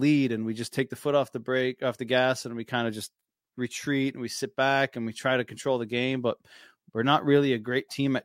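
No technical faults are audible.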